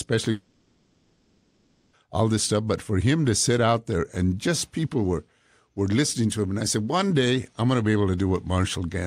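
From 0.31 s to 1.96 s the speech breaks off and a synthetic continuation takes its place, most likely a long network dropout whose lost stretch the receiver filled in. The last sound is stretched into a buzzy hiss that fades to a low, steady noise floor, never reaching true silence. Speech returns at "all this stuff", with the missing portion gone. On a spectrogram this shows as smeared horizontal bands that dim across the gap. The waveform shrinks to a thin, even envelope rather than dropping to zero.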